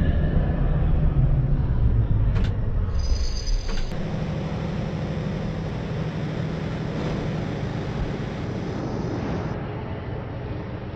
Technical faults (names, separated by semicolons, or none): none